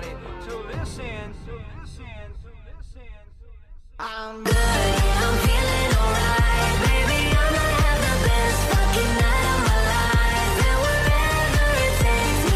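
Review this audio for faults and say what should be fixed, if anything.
Nothing stood out on listening, so there is nothing here that needs fixing.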